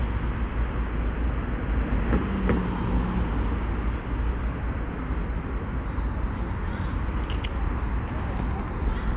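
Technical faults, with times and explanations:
No faults found; the sound arrives over a normal call path with nothing above 4 kHz, which fits G.711 mu-law telephone coding.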